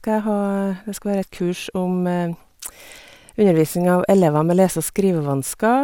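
No technical faults can be heard anywhere in the speech signal.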